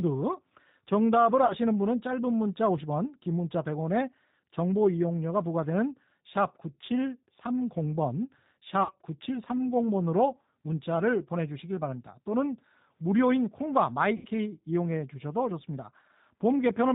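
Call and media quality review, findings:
G.729 codec throughout: 8 kbit/s low-bitrate speech coding rebuilds each 10 ms frame from a vocal tract filter, pitch predictor and sparse pulses. Nothing above 4 kHz survives; speech plainly rough, slightly synthetic.

VoIP packet loss concealed by the speech codec, 1.46–1.54 s: 40 ms missing, fitting two lost packets. Decoder extrapolates last pitch and filter at falling gain; brief smear fading out.

Same, 8.83–8.92 s: 60 ms missing, pointing to three lost packets. Longer stretched sound, decaying; weak or distorted onset after recovery.

Same, 14.17–14.28 s: 80 ms missing, likely four lost packets. Longest extrapolation, deepest fade; voice weak or distorted afterwards as frames rebuild state.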